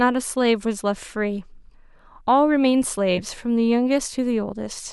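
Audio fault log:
3.17–3.21 s, compressed frames skipped: a single compressed frame of about 10 ms never plays, so the speech jumps slightly ahead.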